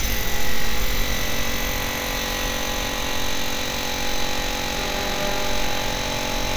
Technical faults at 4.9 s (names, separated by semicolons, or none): none